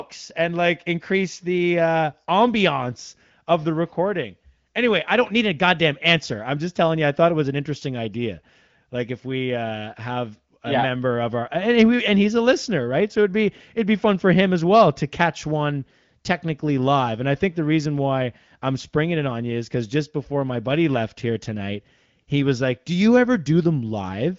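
No technical faults can be heard in this speech.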